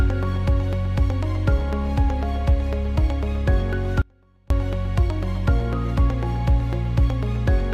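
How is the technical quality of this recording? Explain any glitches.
The recording has one clear glitch, an audio dropout to a faint residue. From 4.02 to 4.50 s the sound abruptly collapses for about half a second, leaving only a faint trace far below normal level, then snaps back. This likely comes from the signal briefly failing upstream while the path stayed live.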